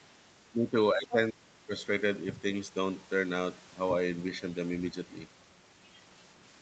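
Speech suppressed in double talk, from 0.51 to 0.76 s and again from 0.93 to 1.73 s: the speech dips by about 10 dB, then falls by about 30 dB, nearly cutting out. This is likely an echo canceller mistaking the talker for loudspeaker echo while both sides spoke.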